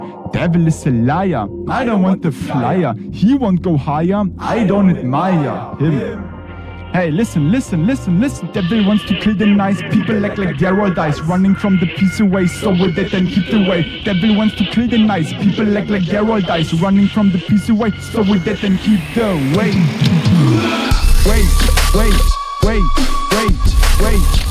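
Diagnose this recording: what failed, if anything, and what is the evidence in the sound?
Nothing failed; no faults heard.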